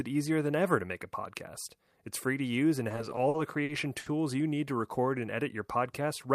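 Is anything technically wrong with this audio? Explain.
Yes. Between 2.89 and 4.08 s, just after "free to use and" and before "you need to record", there are repeated stalls (stutter). Packets arrived late, the jitter buffer ran dry eight times, and the receiver stretched the preceding sound across each wait, the longest lasting about 70 ms. Roughly a fifth of that stretch is this filler, about 220 ms in total. Nothing is lost, but the speech drags and hiccups. On a spectrogram, short smeared, repeated slices interrupt the normal flow.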